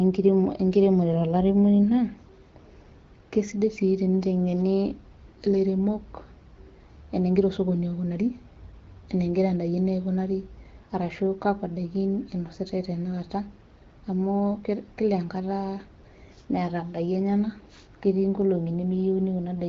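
No faults can be heard in this speech recording.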